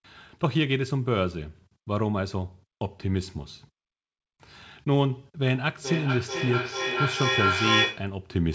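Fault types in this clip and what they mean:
Feedback echo between two devices: two devices on the same call share a room, so each mic picks up the other's playback and the sound loops back about every 400 ms. From 5.54 to 8.19 s the repeats build to about 2 dB above the speech.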